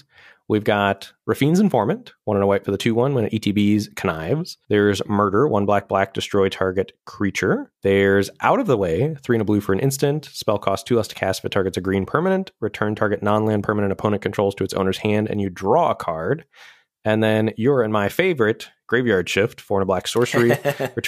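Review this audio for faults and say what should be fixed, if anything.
Nothing needs fixing: the speech signal stays continuous and stable throughout, with no technical faults to report.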